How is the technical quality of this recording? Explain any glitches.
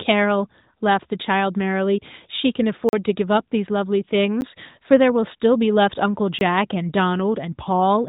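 The speech has three brief dropouts, each a block of digital silence, heard through narrowband AMR-NB mobile coding, which leaves nothing above 4 kHz.

At 2.89 to 2.93 s (40 ms), 4.41 s (10 ms) and 6.39 to 6.41 s (20 ms), the sound cuts out to silence, likely because the output buffer was not filled in time. Each gives a click or short hole. The waveform shows a flat line with abrupt edges, and the spectrogram shows a blank vertical stripe with broadband ticks at each edge.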